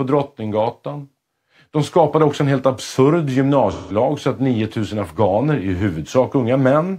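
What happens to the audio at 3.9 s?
At 3.9 s there is AAC frame loss with concealment, running from 3.72 to 3.96 s, between "också en helt absurd" and "så att". About 170 ms, roughly four AAC frames, is missing. The decoder patches the gap from the last good spectrum, giving a smeared, hissy blur. A spectrogram shows frozen, featureless horizontal smearing.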